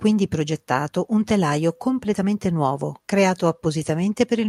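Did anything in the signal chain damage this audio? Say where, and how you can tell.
No, nothing in this speech recording stood out on listening as damage from any stage of the signal chain.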